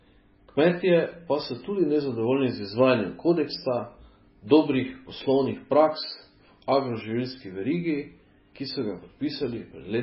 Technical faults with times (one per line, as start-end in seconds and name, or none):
0.00-10.03 MP3 compression